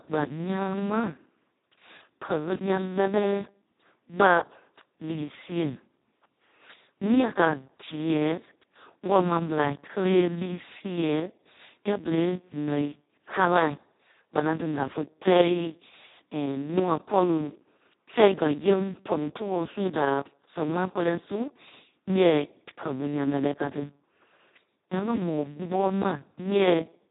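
From start to end the speech carries heavy Speex codec damage, hoarse, buzzy and close to robotic, which points to a bitrate of around 2 kbps. Nothing sounds above 3.8 kHz, yet unlike a simple low-pass, the remaining band itself is grainy and vocoder-like.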